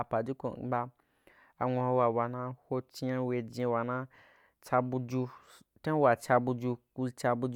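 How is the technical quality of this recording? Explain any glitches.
The technical quality of this recording holds up, with no glitches to explain.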